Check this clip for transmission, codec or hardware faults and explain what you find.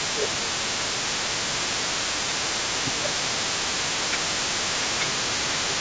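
Three faults are present: a steady computer noise under the speech, repeated dips in the talker's level, and a faint second voice from the far end.

Computer activity noise runs through the whole clip. It is a buzzy, chirping texture pulsing at roughly 70 per second, sitting about 25 dB below the speech. It follows the computer's workload rather than the talking: processor, graphics or mouse activity shifts the ground that the audio circuit shares, and those current swings are picked up as audible interference.

Speech suppressed in double talk occurs at 0.0–0.5 s, 0.77–1.02 s, 1.22–1.91 s and 2.58–5.8 s. The talker's voice sinks by roughly 10 to 15 dB, and the last stretch of about three seconds is held down almost continuously. The likely cause is that both ends were speaking at once. The echo canceller could not tell the local talker apart from the loudspeaker echo, so it attenuated everything together.

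Other side's voice leaking through is audible for the full length of the clip as a second voice roughly 15 dB under the main talker. It is likely loudspeaker playback of the far end reaching the microphone, with the echo canceller removing only part of it. The call microphone processing is working normally, and nothing appears above 8 kHz.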